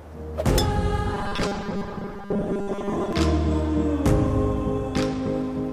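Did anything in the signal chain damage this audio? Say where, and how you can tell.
Yes. From 1.15 to 3.13 s the sound turns into a rigid, metallic 200 Hz buzz. This is robotic sound from repeated short buffers, likely a starved driver or buffer stage looping 5 ms chunks through most of that span. The waveform shows identical repeating cycles, and the spectrogram shows fixed 200 Hz harmonic stripes.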